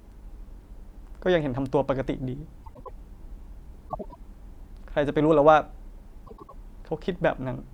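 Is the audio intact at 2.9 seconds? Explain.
No, not quite. From about 2.63 to 2.91 s there's a frames-out-of-order fault: two neighbouring runs, each roughly 104.5 ms long (which fits about four codec frames apiece), got swapped and decoded in the wrong order. That short stretch of speech plays with its halves reversed, so you hear a garbled little flutter. Nothing is actually missing, though. The timing stays intact.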